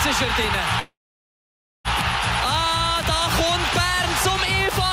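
At 0.79 s the sound stops moving forward and a call audio freeze begins, lasting until 1.88 s. The last fragment is stretched into a brief fading buzz, then about 0.92 s of silence follows. The likely cause is packets held up in transit, leaving the jitter buffer empty. When they arrive, the audio resumes exactly where it stopped. Nothing is lost, but everything after runs about 1.05 s late.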